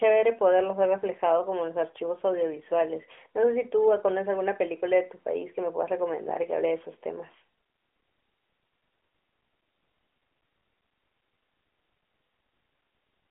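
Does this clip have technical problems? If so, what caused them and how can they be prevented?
No, the speech has no technical faults: it has passed through an AMR narrowband mobile codec, and its light coding character fits the 12.2 kbps mode, with the sound held to the 300 Hz to 3.4 kHz telephone band and nothing above 3.7 kHz, as expected of that path.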